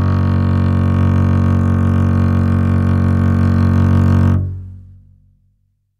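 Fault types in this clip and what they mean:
Resampler restarted on every block: a 100 Hz buzz rides on the music throughout and follows its level. The 48 kHz to 44.1 kHz conversion ran on each 10 ms block in isolation, leaving a small error at every block boundary.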